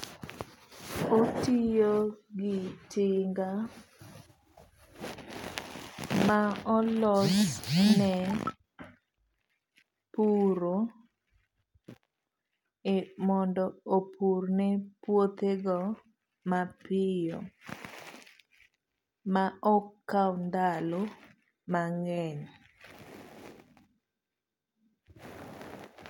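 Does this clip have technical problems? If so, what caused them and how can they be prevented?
No, there are no technical problems to be heard in this speech clip. With nothing going wrong, there is no cause to trace and nothing that needs preventing.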